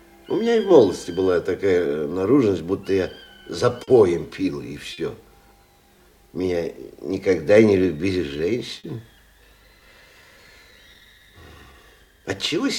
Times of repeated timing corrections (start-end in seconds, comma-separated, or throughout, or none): 0.44-3.42, 5.98-12.63